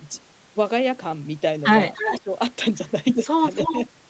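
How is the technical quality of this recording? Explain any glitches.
The recording has the sound of a call path, limited to 8 kHz in the way a wideband call codec would be, with two short echo-and-dropout episodes.

An echo leak appears from 1.94 to 2.2 s and again from 3.51 to 3.74 s. A faint copy of the speech arrives about 0.3 s late, roughly 10 dB below it. The likely cause is a far-end echo canceller letting some loudspeaker pickup through. On a spectrogram, this shows as a weaker, shifted repeat of the speech harmonics.

Speech suppressed in double talk follows the first echo. From 2.1 to 2.29 s, the level dips by around 20 dB for roughly 0.1 s, and a milder dip of a few dB occurs at 3.72 to 3.77 s. This likely happens because the canceller ducks everything when it cannot separate talker from echo. The waveform shows a brief notch in the envelope.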